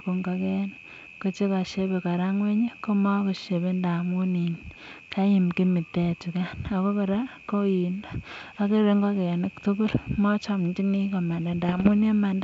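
From 11.69 to 11.89 s, just after "tukul mochomchinii", bit errors on the G.722 ADPCM link, at a rate of a fraction of a percent, throw off the decoder's step size and predictor. The result is pops and rough, ringing bursts with level jumps rather than the silent gaps of packet loss.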